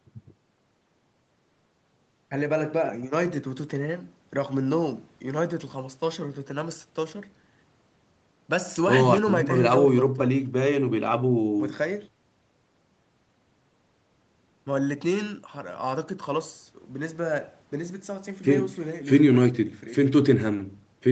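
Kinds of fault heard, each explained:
Nothing here counts as a fault: the speech comes through an ordinary call microphone and Opus call path, and the top end stopping at around 8 kHz is just what that kind of call connection normally does.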